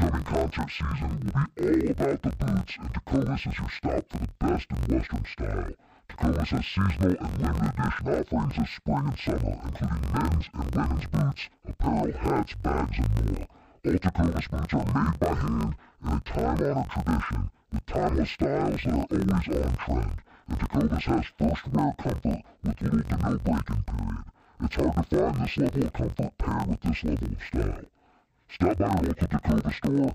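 From start to finish, the speech carries a fault consistent with interleaved audio read as planar. Each block of about 21.8 ms, whose samples alternate left and right, is split in half and sent to two channels, so both play at half speed. The voice drops an octave (-12 semitones) and sounds doubled and choppy. A spectrogram shows harmonics squeezed to half their spacing and vertical seams at 45.9 Hz, and the waveform shows matching block-edge discontinuities.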